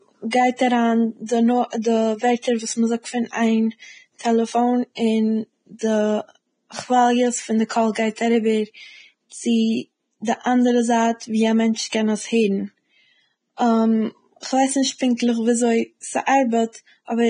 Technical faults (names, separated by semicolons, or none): Vorbis compression